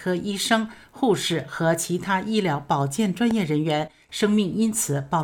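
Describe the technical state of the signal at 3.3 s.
A sudden voltage step, likely from a plug, switch, static discharge or driver glitch, enters the signal path between 3.31 and 3.33 s. It produces a single loud pop, roughly ten decibels above the surrounding level, while the sound continues underneath.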